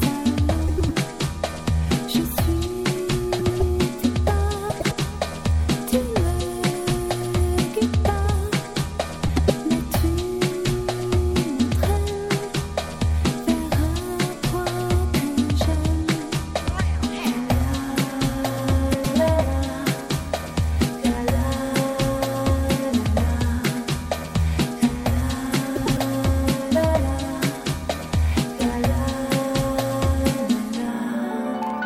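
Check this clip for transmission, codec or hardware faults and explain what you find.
One fault recurs six times: frames out of order, at 0.67–0.91 s, 3.39–3.62 s, 4.70–4.93 s, 9.27–9.50 s, 18.93–19.16 s and 25.75–25.99 s. Each time, two neighbouring blocks of about 105 ms, consistent with four-frame runs, were decoded in swapped order. The stretch therefore plays its second half before its first, giving a garbled flutter, while the overall timing stays intact.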